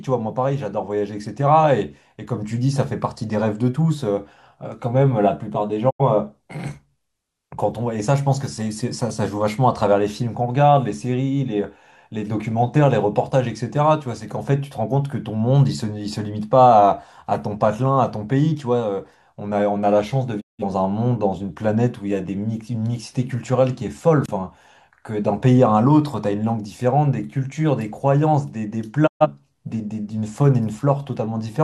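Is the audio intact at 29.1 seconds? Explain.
No. From 29.06 to 29.27 s the speech drops out in a digital broadcast dropout: the receiver stopped getting valid frames and muted until good ones returned. The sound fades to silence over about 20 ms, stays silent, then resumes further along, so roughly 128 ms of speech is simply gone, which fits about three lost frames. Unlike packet-loss concealment, nothing is smeared or repeated, and unlike an analogue cable fault there is no click.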